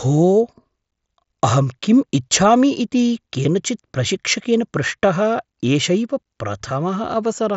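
Nothing technically wrong can be heard in this speech recording. It carries the sound of a Bluetooth mSBC headset codec, with speech reaching up to about 8 kHz and a light grainy texture on the louder syllables, which fits that link working as intended.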